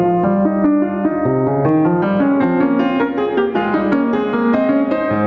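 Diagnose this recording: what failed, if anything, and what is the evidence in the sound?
Throughout, the music breathes: the gain ducks around 20 dB under each loud hit. This is gain pumping, likely from excessive input gain driving a fast limiter.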